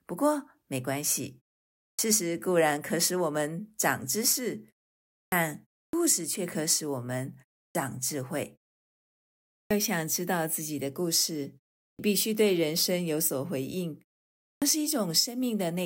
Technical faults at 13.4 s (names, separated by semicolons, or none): none